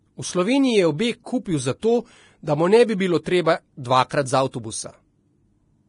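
Speech with heavy Vorbis compression damage throughout. Nothing is heard above about 10.6 kHz. The upper range turns hissy and grainy, with roughened tones and smeared consonant attacks. The likely cause is a low-quality Vorbis encode, which fits a bitrate around 30 kbps.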